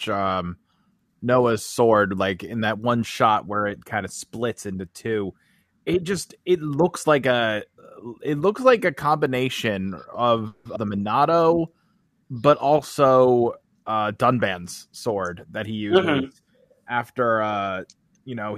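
Just after "looks like a combination", at 10.47 to 10.67 s, a call audio freeze stretches the last sound into a fading buzz or hiss for 180 ms, with nothing lost. This is likely held-up packets draining the jitter buffer.

At 10.75 s a skip ahead drops about a tenth of a second of speech. Playback jumps forward, splicing the two sides almost directly.

From 11.19 to 12.28 s, ending at "but also", a jitter buffer slow-down repeats pitch periods to rebuild the buffer. This adds 91 ms, so speech runs at 92% speed at unchanged pitch.

Between "but also" and "that he", from 13.81 to 15.34 s, a jitter buffer speed-up trims roughly 200 ms of pitch periods to cut excess delay. Speech runs at 112% speed and sounds hurried.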